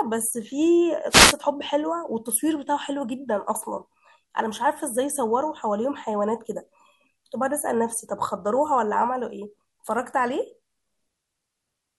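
At 1.09 s a wireless microphone noise hit breaks in and lasts about a quarter of a second, to 1.35 s. The FM radio link has faded, so receiver hiss surges up over the speech, heard as a brief swish of static. On a spectrogram this appears as a broadband vertical smear of noise. The waveform shows a fuzzy, thickened burst over that stretch.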